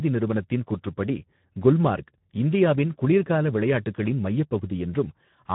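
Throughout the speech, Speex codec damage from a low bitrate near 11 kbps starves the excitation, sounding hoarse and noisy; a spectrogram shows nothing above 3.9 kHz.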